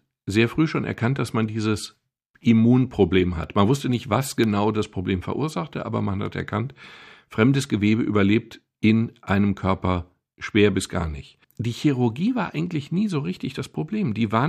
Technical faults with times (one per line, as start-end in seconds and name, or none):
0.43-4.44 periodic USB or driver dropouts
6.11-6.83 CD scratch ticks